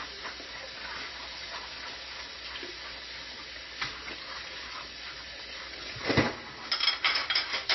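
From start to finish the audio carries plainly audible damage, likely from MP3 compression at a very low bitrate, which fits something around 24 kbps. Nothing is present above 5.8 kHz, so the top end stops at a hard wall. A simple low-pass filter would also dull the sound, but it would not cause the watery, swirling texture heard here. That texture comes from weak frequency lines dropping in and out between frames as the encoder runs short of bits.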